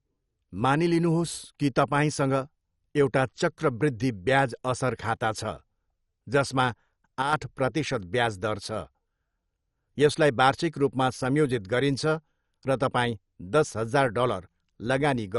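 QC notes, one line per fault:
Throughout: MP2 compression. The speech is dull, with nothing above 11.3 kHz, and a gurgling, granular distortion is plainly audible. This likely comes from MPEG Layer II coding starved of bits, which fits a low rate near 48 kbps. Upper sub-bands are switched off and the remaining ones coarsely quantised.
7.22–7.33 s: one channel drops out. The level falls abruptly by about 6 dB for roughly a tenth of a second, then recovers. This is likely one stereo channel going silent, so the mono sum carries only half the shared signal.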